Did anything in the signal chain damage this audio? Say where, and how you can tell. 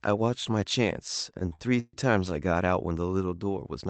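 Yes: repeated stalls (stutter) at the network/jitter-buffer stage, 1.39 to 1.95 s. Four late-packet gaps, longest 135 ms, are bridged by extending prior sound, so delivery drags.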